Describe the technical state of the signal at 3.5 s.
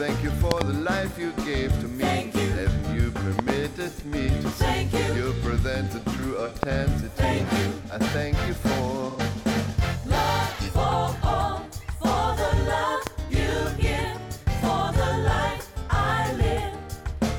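A loud pop runs from 3.39 to 3.52 s, heard as two sharp pops in quick succession standing out around 20 dB above the surrounding sound, which carries on underneath. A sudden voltage step or spike has been added to the signal, likely from a plug, switch, static discharge or driver glitch, and the downstream circuitry has shaped each pulse into a short, hard transient before the signal settles.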